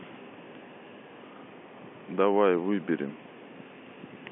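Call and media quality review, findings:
No faults found in this speech clip. G.711 telephone coding path working as expected: audio limited to the usual line band of roughly 200 Hz to 3.4 kHz, with the narrow, phone-like tone that fits 64 kbps mu-law.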